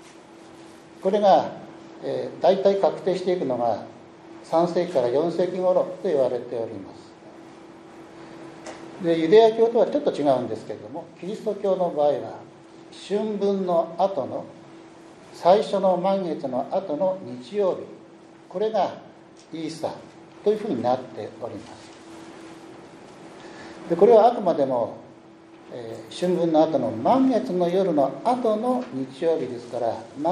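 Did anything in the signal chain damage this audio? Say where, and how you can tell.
Yes. Faint clock slip clicks recur roughly every 70 ms from 0.13 to 30.30 s, as evenly spaced thin vertical spectrogram lines, likely from unsynchronised converter clocks.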